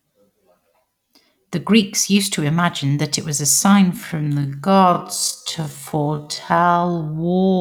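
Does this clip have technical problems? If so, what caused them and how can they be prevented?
Yes. Right after "it was a sign", from 3.92 s to 7.60 s, there's a time-stretched section. The pace suddenly drops to half speed while the pitch holds steady, so it drags. That's likely software repeating short slices to pad the audio out to a target length. To avoid it, fix timing by trimming or re-recording rather than stretching, or keep any stretch small enough that it isn't noticeable.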